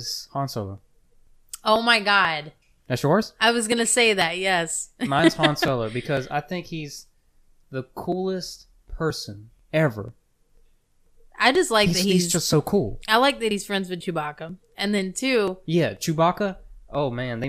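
From 0.29 to 17.44 s, periodic USB or driver dropouts skip about 10 ms every 0.49 s. The clockwork regularity of the ticks, heard only over speech, separates them from random glitches.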